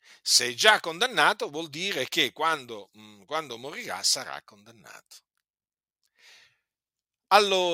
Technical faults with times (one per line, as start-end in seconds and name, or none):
none